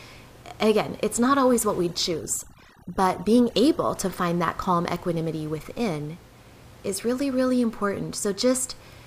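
From 1.81 to 3.95 s, between "it's not always what" and "to find that calm", overdone noise removal strips out individual frequency bands near the noise estimate. The room noise, about 24 dB below the speech, drops and breaks up into twinkling specks, unlike low-bitrate coding, which would smear the whole signal.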